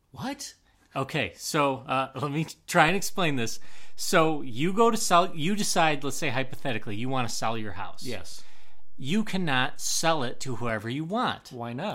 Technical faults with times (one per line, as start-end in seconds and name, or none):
2.88-10.69 DC step